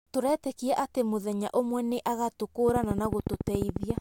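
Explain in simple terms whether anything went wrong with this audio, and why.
A train of clicks runs from 2.69 s to 3.99 s: about twenty sharp ticks at a steady 14 per second, sitting on top of the speech and loud against it. The likely cause is electrical interference or a faulty connection or power supply.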